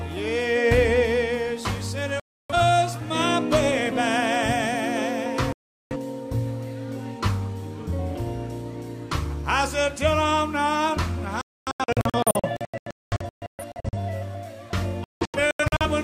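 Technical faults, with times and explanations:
2.20–2.55 s: digital broadcast dropout. The receiver lost the signal and muted until good frames returned, leaving about 0.3 s of silence with that programme lost.
5.53–5.96 s: digital broadcast dropout. Reception failed again and the decoder muted, cutting roughly 0.38 s of sound, which resumes later with the missing part gone.
11.41–13.97 s: digital broadcast dropout. Frames kept failing intermittently, so muting switched on and off in short holes totalling about 1.5 s, the longest 0.26 s.
15.04–15.86 s: digital broadcast dropout. Renewed checksum failures cause scattered muting, several brief gaps totalling about 0.43 s, the longest 0.17 s, with the intervening audio lost.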